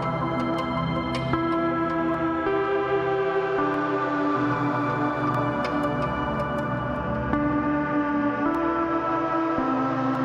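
From 0.54 s to 10.15 s, clock drift buffer slips cause about seven regular clicks every 1.6 s, likely from mismatched device clocks around 200 ppm apart dropping or repeating roughly 15 samples.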